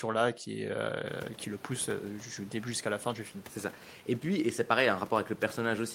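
No system faults in this speech; the background noise of the room itself comes up by about 23 dB at around the one-second mark and then sits about 24 dB below the speech, which is part of the recording rather than anything the chain did.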